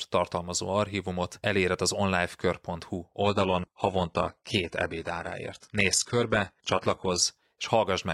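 At 3.22 s the speech switches abruptly to an adaptive stream at a lower bitrate, with no gap or stutter at the joint, and it stays there for 4 s until 7.22 s. Nothing above 11.8 kHz survives, which fits a fall from a 96 kbit/s AAC-LC stream to a very low-rate HE-AAC one. The clean, instant step up and down separates this from a gradual filter or a network dropout.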